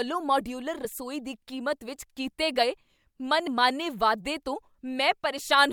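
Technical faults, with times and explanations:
0.85 s and 3.47 s: compressed frames skipped. Each time a single compressed frame, roughly 30 ms of audio and consistent with a 32 ms frame, goes unplayed, so the speech jumps forward just before "ਦੀ ਕੀਮਤ ਵਿੱਚ ਕੀਤੇ" and "ਵਾਧੇ ਤੋਂ".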